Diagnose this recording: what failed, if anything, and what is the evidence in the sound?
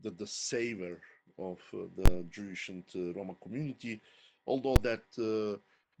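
Invalid numbers at full scale in a processing stage: loud bangs at 2.06 s and 4.76 s, where a calculation blew up to infinities and the output slammed to full scale for 20 ms and 5 ms.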